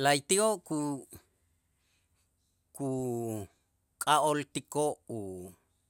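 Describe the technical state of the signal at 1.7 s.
At 1.7 s the speech signal is intact, with no audible fault at that moment.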